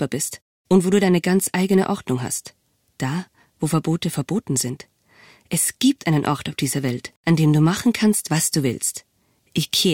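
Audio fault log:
No audible faults detected.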